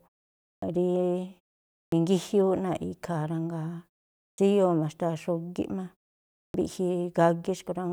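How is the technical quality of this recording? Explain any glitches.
The speech has a recurring glitch: clipped start after a pause, at 0.58, 1.88, 4.34 and 6.50 s. Each phrase begins abruptly, missing its first 41 to 44 ms, because the output device sleeps during the roughly half-second silences and wakes too late. The pauses themselves go quiet as expected.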